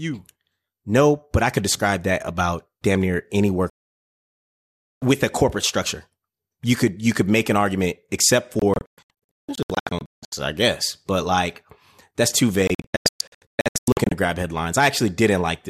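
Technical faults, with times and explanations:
3.70–5.02 s, 8.59–10.33 s, 12.67–14.12 s: digital broadcast dropout. The receiver lost good frames and muted. After "about damn near any" the speech vanishes for 1.32 s. After "make an argument except" and "like that's too" it breaks into short holes of up to 0.17 s. Whatever was said is gone.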